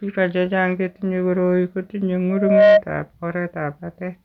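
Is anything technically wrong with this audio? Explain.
Yes. From 2.29 to 2.82 s the speech carries a loudspeaker feedback squeal: the microphone is hearing its own loudspeaker, and at 627 Hz the loop gain tops one, so that tone feeds itself. It swells over a little under half a second into a howl roughly 10 dB above the speech.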